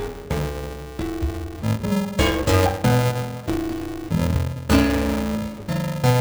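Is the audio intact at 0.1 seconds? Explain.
No. At 0.1 seconds the audio suffers from interleaved audio read as planar, present throughout. Each short block, about 2.67 ms, which fits a 128-sample block, has its alternating left and right samples split into halves. The sound turns dull and robotic, buzzing at 375 Hz.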